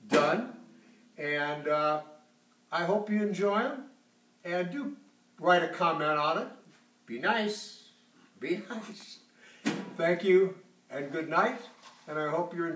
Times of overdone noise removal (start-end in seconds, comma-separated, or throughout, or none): none